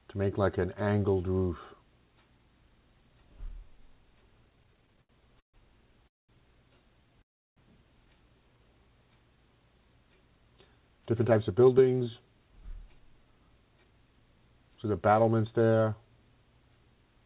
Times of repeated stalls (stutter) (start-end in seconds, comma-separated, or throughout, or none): 4.46-5.56